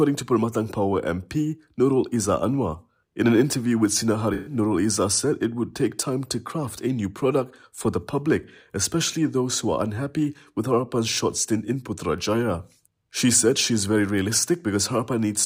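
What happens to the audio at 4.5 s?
AAC frame loss with concealment, 4.34–4.54 s: about 128 ms of lost frames is filled from the previous spectrum, giving a smeared, phasey patch rather than a silent dropout.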